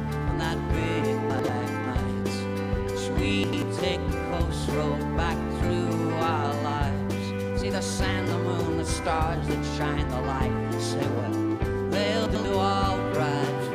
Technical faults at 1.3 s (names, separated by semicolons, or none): chunks out of order